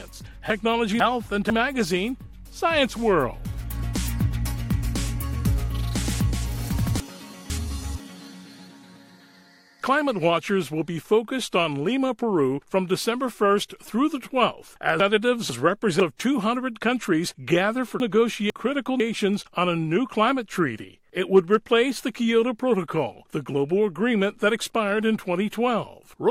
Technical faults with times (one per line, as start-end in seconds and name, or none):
0.50-1.50 chunks out of order
7.00-8.00 chunks out of order
15.00-16.00 chunks out of order
18.00-19.00 chunks out of order